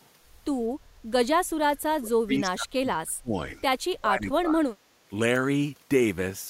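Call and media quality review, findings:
Speech drops sharply, by roughly 30 dB at worst, from 1.64 to 3.37 s and again from 3.86 to 4.75 s. Likely speech suppressed in double talk: echo canceller mistaking near-end speech for loudspeaker echo and attenuating both.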